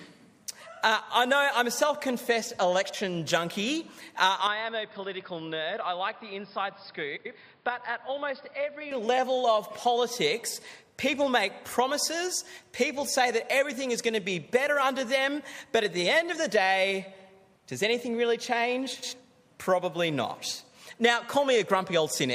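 Around 2.84 s there's a short garbled flutter, frames out of order, where two neighbouring chunks of about 46 ms play with their halves swapped, but no time is lost. From 4.47 to 8.91 s the sound turns dull and a bit quieter, with nothing above 5.2 kHz and a faint new noise floor, most likely the input switched to a poorer device. Inside that stretch, at 7.16 s, another swap of two 93 ms blocks flutters past. There's a tiny one at 10.50 s with 23 ms blocks, and a last 93 ms swap at 18.93 s.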